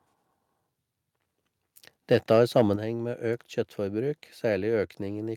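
From 2.12 to 2.62 s the loudest speech peaks flatten with a harsh, crackly edge, likely microphone overload: input gain about 3 dB too high, clipping around one percent of samples. At 2.76 s speech and background drop abruptly by about 6 dB, the microphone volume stepped down, likely by the call software reacting to that clipping.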